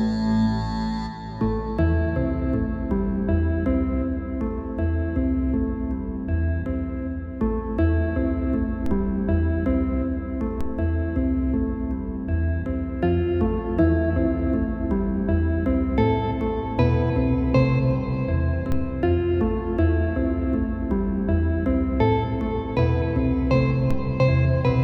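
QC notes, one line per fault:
8.86, 10.61, 18.72 and 23.91 s: DC step. At each instant the waveform's zero line jumps abruptly, by about -19 dBFS at the first two and about -16 dBFS at the last two. The sudden shift is heard as a low thump or click while the audio continues unchanged. The offset does not hold; it sags back toward zero over a fraction of a second, consistent with a roughly 2 Hz high-pass draining it away.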